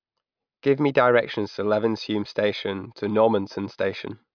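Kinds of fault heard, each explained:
No technical faults heard.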